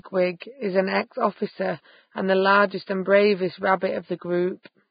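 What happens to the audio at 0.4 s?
At 0.40 s, just before "is an", there is pre-echo. A transform codec spreads each block's quantisation noise across the whole block, so noise sized for the attack fills about 19 ms of quieter signal before it. It is heard as a brief hiss and a smeared onset. On a spectrogram, broadband noise appears just ahead of the onset. On the waveform, low-level fuzz builds up before the transient.

That moment also carries heavy codec damage from the likely Vorbis compression: nothing above 4.9 kHz survives, and treble detail is quantised into grainy, hissy noise, which points to a very low bitrate. On a spectrogram this shows as a flat ceiling at 4.9 kHz with speckled, blocky energy beneath it.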